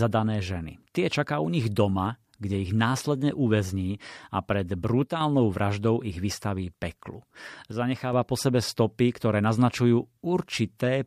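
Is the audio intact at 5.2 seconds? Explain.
No. At 5.2 seconds the speech is inside a brief dip that runs from 5.04 to 5.21 s, right after "následne uväzní a pred" and just before "vraždou ich vystaví peklu". For about 0.17 s the level falls abruptly by about 6 dB and then snaps back. This is a one channel drop-out, likely a stereo channel briefly going silent, so the mono sum keeps only half of the shared signal.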